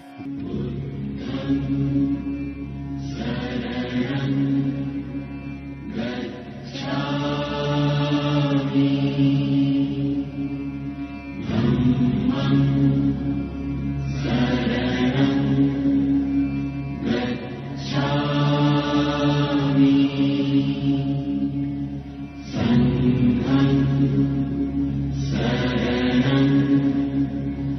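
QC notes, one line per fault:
No faults found.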